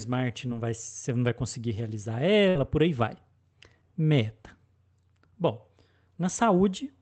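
A speech clip with two packet-loss faults. The first is a short concealed packet loss at about 0.47 to 0.51 s, just before "vai você não vai". About 20 ms of audio never arrived in time. The receiver covered roughly 16 ms of it by carrying the last sound forward, then blended back into the real signal. The result is a brief smear or wobble, and a small piece of sound is lost. The second is a burst of packet loss from 2.49 to 2.57 s, between "não vai conseguir realizar" and "por aí vai". Here about 60 ms went missing in a row. The receiver extended the preceding sound for about 59 ms while fading it down. That is heard as a short held buzz or dying hiss, and then the speech jumps ahead with that part missing. Both gaps sit on an Opus call path whose audio stops near 8 kHz.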